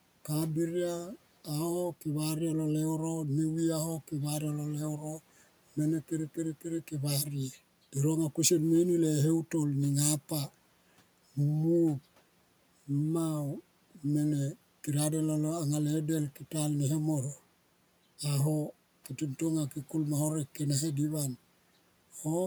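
At 4.98 to 5.2 s the speech is cut by the noise suppressor. Within that span, roughly a tenth of a second of speech was classed as background and attenuated along with it, by as much as about 9 dB at the deepest point. The affected sounds come across swallowed and faint, dipping toward the room noise, which sits about 27 dB below the speech, before the level recovers.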